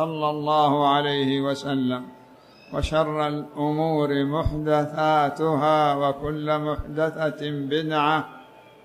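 Listening through the recording, nothing stood out as a technical problem at any point.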